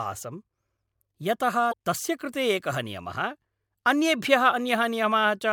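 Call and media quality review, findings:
Damaged data in compressed stream, 1.69–1.74 s, just before "तस्य कृते एकः": brief glitch as decoder loses frame sync and resyncs. Distinct from packet loss, which leaves concealed gaps.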